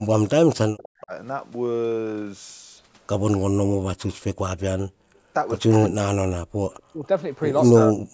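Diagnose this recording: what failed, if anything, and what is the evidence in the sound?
Speech suppressed in double talk, in the call processing stage: the speech drops by roughly 40 dB, in pieces, over 0.00–1.13 s, 5.79–6.59 s, 6.88–7.06 s and 7.72–8.13 s. The likely cause is an echo canceller that could not tell this talker from loudspeaker echo during simultaneous talk, so it attenuated both.

Echo leak, also in the call processing stage: brief delayed copies of the speech appear at 3.31–3.38 s, 5.15–5.19 s and 6.77–6.82 s. Each trails by 248 ms, at roughly 20, 40 and 35 dB below the speech. This is likely residual loudspeaker echo that the far-end canceller failed to remove and sent back.

Background gated by the echo canceller: from 5.00 to 5.15 s the room sound drops by about 34 dB for roughly 150 ms, then recovers. The canceller clamped the microphone hard while the loudspeaker was active and released it once playback stopped.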